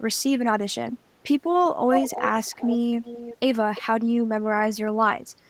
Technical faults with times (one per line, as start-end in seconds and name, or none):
1.88-2.77 echo leak
3.05-3.37 echo leak
3.75-3.82 echo leak